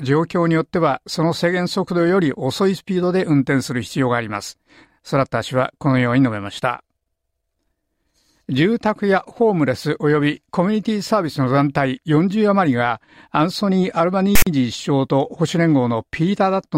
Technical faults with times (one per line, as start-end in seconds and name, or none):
14.35-14.47 file tags played as audio